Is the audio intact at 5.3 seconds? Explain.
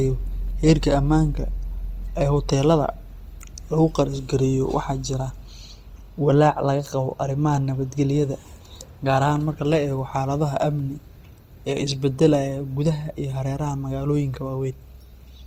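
No. At 5.3 s, as across the whole clip, the speech sounds grainy and rough, likely from Opus compression at a low bitrate. Starved bands are filled with folded or noisy content.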